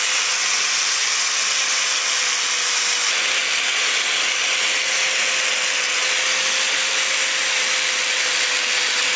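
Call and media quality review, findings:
Nothing to flag here: the call audio comes across as it should for a G.722 path, with the expected wideband ceiling around 8 kHz and no dropouts, glitches or level problems turning up anywhere.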